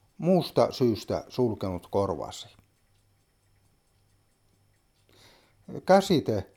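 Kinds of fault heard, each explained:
computer activity noise: A faint, rapid buzzing chirp, pulsing around 70 times a second and sitting roughly 45 dB below the sound, runs from 0.45 to 2.45 s and then stops. Shifting processor or graphics load disturbs the audio circuit's shared ground, so the noise follows the computer's work rather than the sound.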